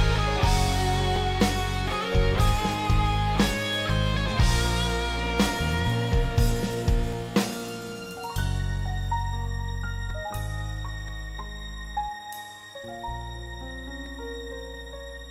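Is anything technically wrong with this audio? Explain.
Yes. There is an overlap between stream segments, heard at 1.16, 2.14, 7.13, 10.10, 11.08 and 14.06 s. Each event falls on a 1.0 s segment boundary. There, the timestamps of adjacent segments overlap, and the player trims about 6 ms of audio that was never duplicated. The sound then jumps ahead, producing a tiny click or skip. A waveform shows an abrupt discontinuity at each point, and a spectrogram shows a thin vertical broadband line.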